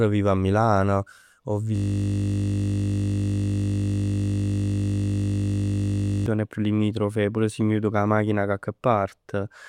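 At 1.76 s the speech locks into a system hang loop that lasts until 6.26 s, about 4.5 s in total. A single 20 ms fragment of audio repeats exactly, more than two hundred times, while the audio hardware keeps replaying the same ring buffer after the host or driver stopped supplying new data. Because the looped segment is so short, the result is a steady buzz at 50 Hz rather than a stutter, which fits a 20 ms buffer.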